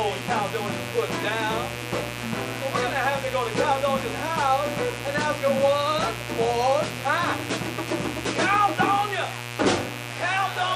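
Switching spikes from a dimmer, rectifier or unshielded connection are getting into the signal path twice per cycle of the 60 Hz supply, so mains buzz runs through the whole clip: a steady, raspy buzz with harmonics climbing into the kilohertz range, sitting about 10 dB below the audio.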